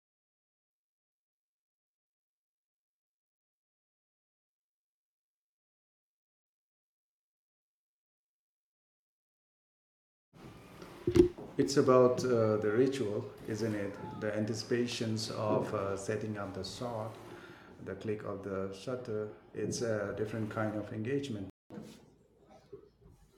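A speech clip in which the sound cuts out abruptly at 21.50 s and stays silent for about 0.21 s, until 21.70 s, before carrying on from where it broke off. This is a playback stall: the output went quiet in mid-flow, most likely because the player ran short of buffered data or its audio thread was held up, and it resumed only once data was flowing again. Immediately after the gap, from 21.70 s to 23.08 s, the speech runs noticeably fast and sounds raised in pitch by about two semitones, then settles back to normal. That is catch-up at higher speed: the player resamples its backlog at 1.15 times normal rate to recover the time lost in the stall, and because speed is changed by resampling rather than time-stretching, pitch rises together with tempo until the delay is made up.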